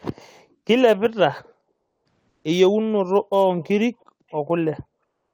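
Sample clock jitter runs through the whole clip. Converter timing wanders by several microseconds, leaving a roughness around 30 dB below the speech that grows on loud, bright passages.

From 1.71 to 2.05 s and again from 2.29 to 2.43 s, comfort noise replaces the background. The likely cause is Opus discontinuous transmission halting during pauses. The real room tone gives way to flat synthetic hiss, about 5 dB and about 2 dB quieter.

At 4.30 s a brief echo leak appears: a very faint copy of the speech 384 ms late, likely slipping past the far end's echo canceller.

From 5.03 s to the end, comfort noise returns for 306 ms, featureless and about 6 dB below the original background.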